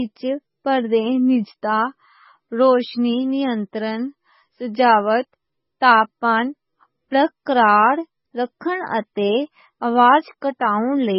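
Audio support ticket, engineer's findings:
Watery, swirly speech throughout; s sounds chirpy, attacks smeared. Likely MP3 compression, heavy, consistent with roughly 16 kbps. Spectrogram: hard ceiling at 5.6 kHz, flickering holes below where weak frequency lines drop out frame to frame.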